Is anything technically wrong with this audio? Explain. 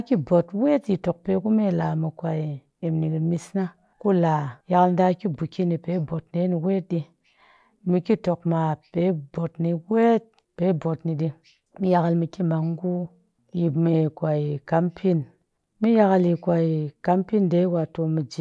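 No, nothing technically wrong turns up on listening; the recording shows no audible faults anywhere.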